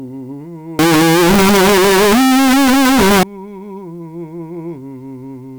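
From 0.79 to 3.23 s the music turns into loud, harsh distortion, even the quiet bits. That's likely signed and unsigned mixed up in the 8-bit samples, flipping each zero crossing into a full-range jump.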